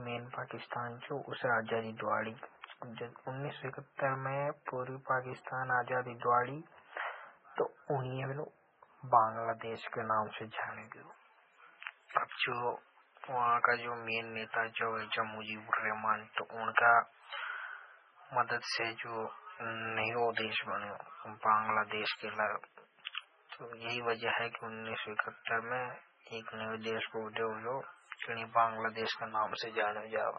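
From the start, the speech has heavy watery, swirling artefacts, with weak detail flickering in and out and nothing above 10.3 kHz. This is likely MP3 compression at a very low bitrate, around 16 kbps. It differs from plain low-pass filtering by that unstable, chirpy texture.

From 10.6 s, right after "के नाव से", pre-emphasis is left on. The treble boost was never undone, so the sound turns thin, bright and sibilant, about 11 dB up at 10 kHz against 1 kHz, fitting a J.17 curve. It is a fixed tonal tilt, not fluttering codec noise.

From 16.34 to 16.37 s, pre-echo puts a 39 ms hiss just before an attack. The codec spread noise sized for the loud onset across its whole block, softening the attack. Unlike a click, the hiss comes before the event.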